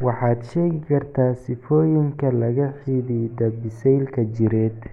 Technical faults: none

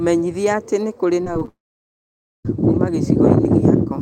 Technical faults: repeated packet loss (robotic sound); long network dropout

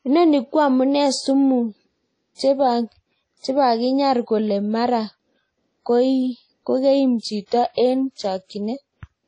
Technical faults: WMA compression; pre-echo

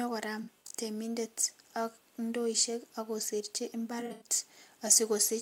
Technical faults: AAC frame loss with concealment

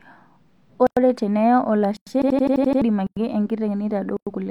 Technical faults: gap between chunks; system hang loop

